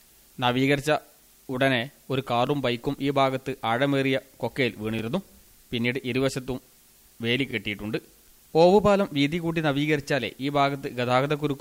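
The audio has overlapping chunks: a short stutter recurs at 2.47–2.49 s, 4.99–5.01 s, 7.51–7.53 s and 10.03–10.05 s, spaced about 2.5 s apart. At each join the new chunk begins before the previous one finished, so roughly 21 ms of sound plays twice. That tiny repeat, rather than a silent gap or missing audio, is what separates it from dropouts. Its strict, even spacing marks chunked processing rather than random network glitches.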